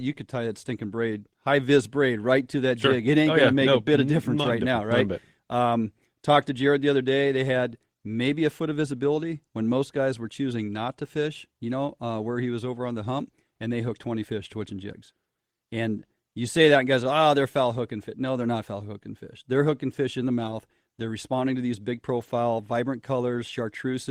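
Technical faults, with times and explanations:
5.07 s, 13.19 s, 20.39–20.53 s and 22.19–22.29 s, lost packet rebuilt from error correction: with no gap, the speech turns briefly rough and noisy, once for about 20 ms after "difference right now right", once for about 20 ms between "was over on the" and "and they hooked", once for 80 ms, and once for 60 ms after "responding to these big". Each missing stretch was filled from a low-bitrate backup copy carried in the following packet, so it plays coarser than the surrounding audio.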